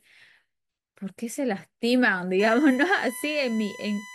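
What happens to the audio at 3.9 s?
At 3.9 s there is USB whine. It runs from 2.39 s to the end of the clip. It is a fixed-pitch tone built on 1 kHz, strongest at 2 kHz, roughly 20 dB below the speech. The bus's 1 ms frame timing leaks into the audio through power or ground.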